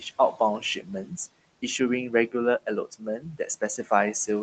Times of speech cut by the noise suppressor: 2.10-2.34, 2.91-3.91

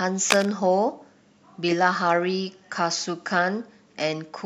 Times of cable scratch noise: 0.30-0.46

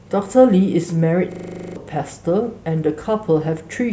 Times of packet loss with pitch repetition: none

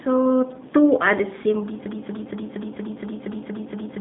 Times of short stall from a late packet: none

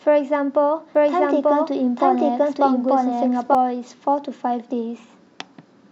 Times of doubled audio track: 0.95-3.55

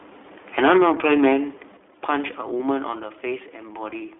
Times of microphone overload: 0.58-1.30

